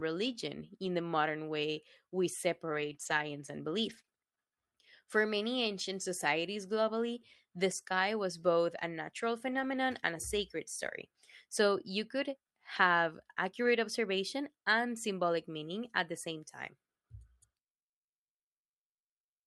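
At 0.85 s, just before "the modern way we", a lost packet was rebuilt from error correction. The decoder played a low-bitrate copy, so the sound turns briefly rough and noisy. On a spectrogram the harmonics blur into grainy noise. The same happens from 2.69 to 3.19 s, 3.85 to 3.99 s and 9.47 to 9.77 s, at 12.75 s after "you could", and from 13.65 to 13.71 s, between "you could have" and "observation and symbolic meaning".

From 4.01 to 4.05 s and again from 4.05 to 4.09 s there is short concealed packet loss. Missing audio was filled by extending the previous sound, which gives a smeared wobble.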